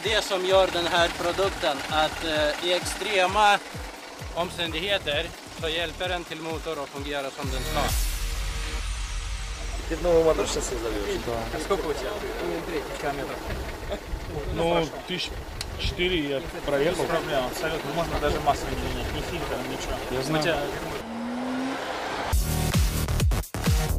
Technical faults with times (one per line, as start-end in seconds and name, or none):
none